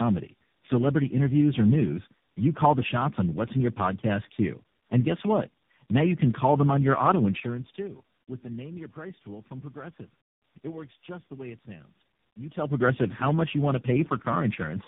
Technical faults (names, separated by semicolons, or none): tandem speech coding